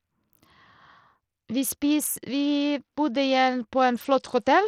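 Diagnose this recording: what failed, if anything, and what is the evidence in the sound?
The codec stage failed: throughout the speech the treble flickers in and out and a gritty, grainy noise rides on the sound, with aliased tones. That points to Bluetooth SBC compression as the likely cause, at a small bit pool that fits a rate near 80 kbps. The top sub-bands are starved of bits and the rest are coarsely quantised. A spectrogram would show upper bands blinking off in blocks, with a hard, uneven ceiling and a speckled noise floor.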